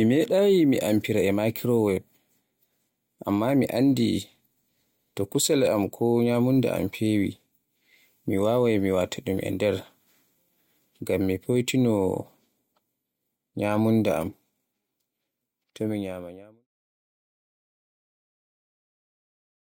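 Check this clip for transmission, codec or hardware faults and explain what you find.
No faults are audible in this speech recording, and the only change in the signal is a smooth, edited fade-out from around 15 s to 16.7 s that ends without any click or hard edge.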